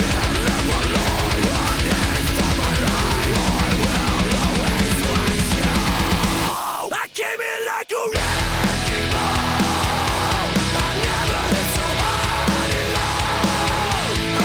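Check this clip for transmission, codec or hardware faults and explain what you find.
No transmission, codec or hardware faults can be heard.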